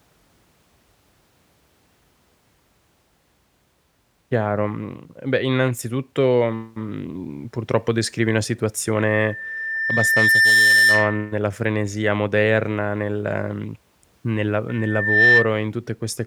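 At 8.95 s, after "mhmm purtroppo descrivi una", a loudspeaker feedback squeal rises at 1.8 kHz. The microphone is re-hearing its own loudspeaker, and the loop gain at that frequency has passed one. The tone swells over about a second and a half to roughly 10 dB above the speech and stops at 11.37 s, before "frenesia moderna nel nel". It recurs from 14.68 to 15.54 s, after "moderna nel nel a", building faster, in about half a second. On a spectrogram each appears as a bright horizontal line at 1.8 kHz, and the waveform envelope swells steadily.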